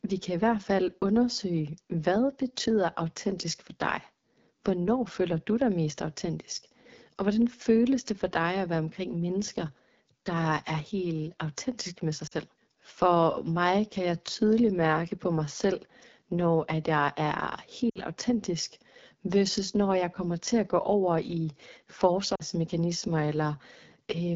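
AMR wideband (HD Voice) codec runs through the whole recording. The codec models speech up to 6.4 kHz as pulses driving a vocal tract filter and fills 6.4 to 7 kHz with shaped noise. Here the coding damage is plainly audible: the speech has a rough, raspy grain and a synthetic top end. That points to one of the two lowest AMR-WB rates, most likely 8.85 kbit/s.

Lost AMR speech frames occur at 12.27 to 12.34 s, right after "helt autentisk med sig", at 17.89 to 18.00 s, after "når at jeg er", and at 22.35 to 22.43 s. Corrupted frames failed their checksum, so the decoder repeated the last good pitch and vocal tract settings at falling gain. The first and last gaps last 40 ms, which fits two frames, and the sound drops to near silence. The middle gap lasts 60 ms, pointing to three frames, and the sound drops to near silence before the speech returns briefly weak or rough.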